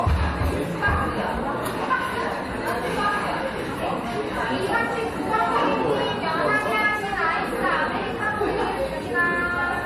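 A recording of sounds, with transcoding between lossy codecs audible throughout. Nothing is present above 14.5 kHz, so the top end is dull and airless. Two kinds of coding damage are heard together. The likely cause is a low-rate MP3 encode that was later re-encoded to low-rate AAC-LC. The second codec spent its limited bits reproducing the first codec's errors and then added its own.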